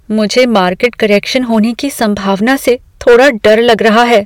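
Hard clipping runs through the whole of this speech clip: the signal is driven about 10 dB past what a stage can pass, so around one sample in twenty is squared off flat, and those truncated peaks add high harmonics heard as harsh fuzz on louder syllables.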